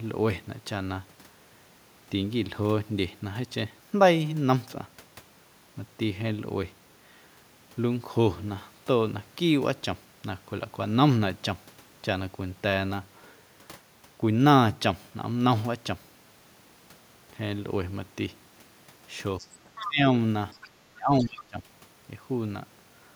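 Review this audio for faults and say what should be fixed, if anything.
Faint scraps of a second voice, the other side's voice leaking through, surface at 19.38–19.56, 19.75–19.86, 20.61–20.69 and 21.22–21.44 s, sitting well below the talker (about 15 to 25 dB down). This is likely loudspeaker playback that the echo canceller left in the microphone signal. Better acoustic separation and a stronger residual-echo stage would prevent it.

The talker's speech is suppressed in double talk at 19.81–20.07 and 20.88–21.63 s. The voice dips sharply by around 25 dB for roughly a third of a second and then most of a second, overlapping the leaked echo. This is likely the canceller attenuating both voices because it couldn't separate them. Tuning the double-talk detector to favour the near-end talker would prevent it.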